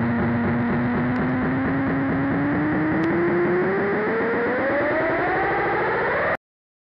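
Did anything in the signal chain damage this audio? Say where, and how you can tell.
Yes. Loud pops enter at the analogue stage, likely a voltage spike from a plug, switch or static discharge. A double pop spans 1.16 to 1.31 s, about 5 dB above the programme, and a single, harder pop at 3.04 s reaches about 10 dB. The sound continues underneath, so nothing was lost, unlike a dropout.

A cut-off end comes from the buffer or storage stage. At 6.35 s the audio stops mid-sound and falls straight to digital silence with no decay or tail, because the final buffers were never written. A natural ending or fade would taper away instead.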